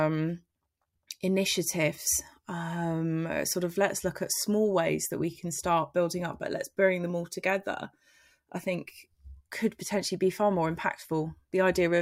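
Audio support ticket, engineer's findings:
No faults found on listening; nothing to report.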